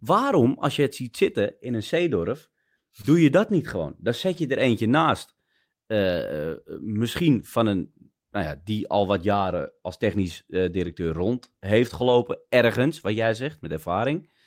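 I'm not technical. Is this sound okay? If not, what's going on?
No. At 3.01 to 3.05 s there is a short concealed packet loss: a sliver of the call arrived too late, so the receiver briefly stretched the preceding sound to cover it. The result is a quick smear or wobble where a small piece of sound can disappear.

There are also several cases of a lost packet rebuilt from error correction: at 3.03 to 3.05 s, 4.33 to 4.39 s, 7.41 to 7.43 s, 9.49 to 9.51 s, 10.85 to 10.91 s, and 11.95 to 12.13 s. Each time, a lower-quality backup copy filled the hole, so the sound never drops out, but those moments are rougher and noisier. The last one is the longest, about a tenth of a second.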